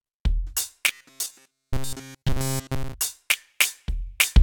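From 0.89 to 2.94 s the music turns into a rigid metallic buzz near 133 Hz: robotic sound, likely from a roughly 7.5 ms buffer replayed throughout.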